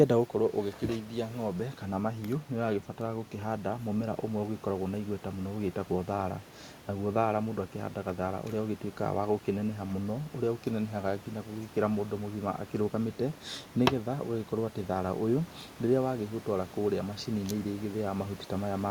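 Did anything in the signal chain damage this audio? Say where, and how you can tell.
No, nothing in the chain has damaged this speech recording; the only other sound is the room's own background noise, about 22 dB below the speech, which comes from the recording space rather than from any stage of the system.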